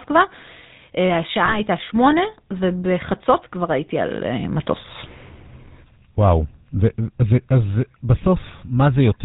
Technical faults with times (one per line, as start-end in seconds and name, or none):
0.00-9.24 GSM full-rate codec
1.46-1.58 lost GSM frames